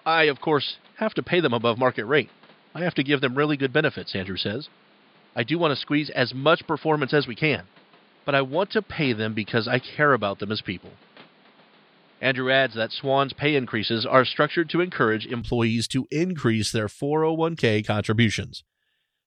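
Speech that sounds dull and boxy from 0.0 to 15.42 s, with nothing above 5 kHz and a faint new noise floor around 30 dB down, then opens up abruptly, with no gap or level jump, just before "to increase their". The likely cause is an input switched to a poorer device.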